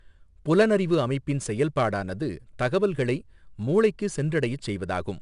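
Speech clip coded throughout with 4-bit ADPCM compression: each sample is stored as a coarse 4-bit step from a prediction, so a gritty hiss rides on every loud stretch and tracks its level. Nothing reaches above 10.6 kHz, which fits a rate of about 89 kbps.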